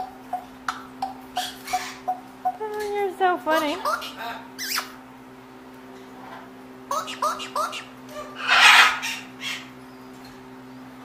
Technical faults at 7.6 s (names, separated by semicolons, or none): clock drift buffer slips